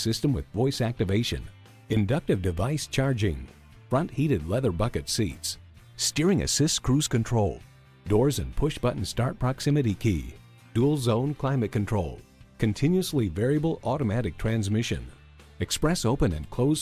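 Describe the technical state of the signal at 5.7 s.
At 5.7 s the signal is intact, with no dropout, click, distortion or other fault audible at that moment.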